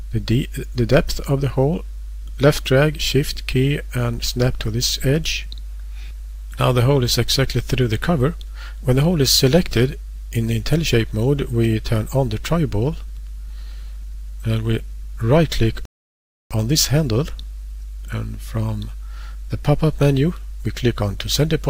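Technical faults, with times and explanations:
15.85 to 16.51 s, rebuffering stall: the sound drops abruptly into silence for about 0.65 s and then picks up at exactly the point where it broke off, with nothing skipped or repeated. The playback buffer ran dry before the next chunk of audio had arrived, so the player simply paused until data came in and then carried on. Because no material is discarded, the clip runs longer by that gap.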